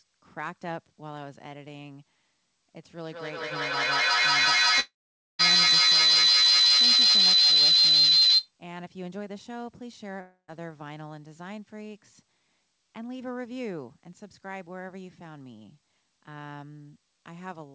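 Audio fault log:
3.06–8.54 s, feedback howl: A tone at around 4 kHz rises out of the audio and climbs to about 17 dB above the speech, pulsing roughly every fifth of a second. Two devices on the same call are sharing one room, so sound leaving a loudspeaker is picked up again by a microphone and sent back louder on each trip. Each pass around that loop reinforces the frequency it favours most, so the repeats grow into a single ringing pitch until the loop is broken.
4.80–5.41 s and 10.21–10.50 s, long network dropout: Both times the sound turns into a fading buzz or hiss, the receiver's attempt to stretch out the last audio it had. After that comes silence, lasting about half a second the first time and about 0.12 s the second. When the audio returns, it picks up further along, and whatever fell in the gap never plays. The likely cause is a run of lost network packets.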